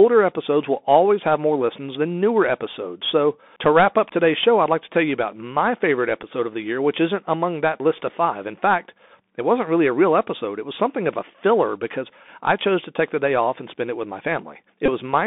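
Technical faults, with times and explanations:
Throughout, Bluetooth CVSD headset codec. The sound is squeezed into a narrow line band of about 200 Hz to 3.6 kHz. The one-bit encoding, which fits a 64 kbps link, leaves a granular hiss underneath. S sounds turn scratchy, and loud high sounds distort.
6.23 s and 14.86 to 14.89 s, Bluetooth headset packet repeated. Lost packets were filled by decoding the previous packet again. At 6.23 s the gap is 7.5 ms, which fits two 3.75 ms packets. The later 22.5 ms gap, about six packets, makes a short buzz near 267 Hz.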